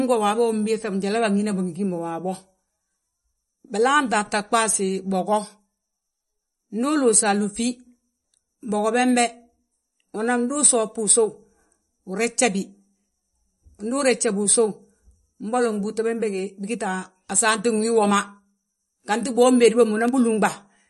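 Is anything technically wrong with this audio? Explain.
Yes. Throughout, the speech has no content above 11.5 kHz and sounds plainly watery and swirly. This is likely MP3 compression, whose encoder drops the treble and flickers weak frequency lines at a starved bitrate near 40 kbps.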